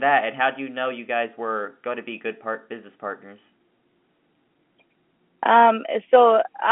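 No faults are audible; the speech sits in a telephone band of roughly 200 Hz to 3.4 kHz with nothing above 3.8 kHz, which fits normally working G.711 telephone coding.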